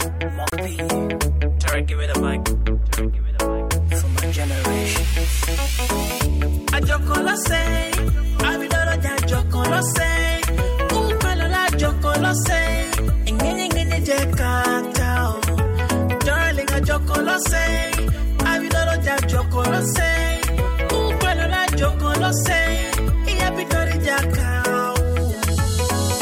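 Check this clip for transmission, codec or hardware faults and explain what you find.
One fault is audible, a brief dropout near the start. At 0.50 to 0.53 s the sound cuts to silence for about 24 ms, then resumes. This is likely a Bluetooth stall. Delayed radio packets left the headphone buffer empty, so playback paused until retransmitted data arrived.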